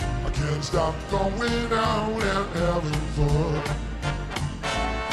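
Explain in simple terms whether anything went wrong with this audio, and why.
Nothing went wrong: I hear no dropouts, clicks, distortion, glitches or level problems anywhere in this recording.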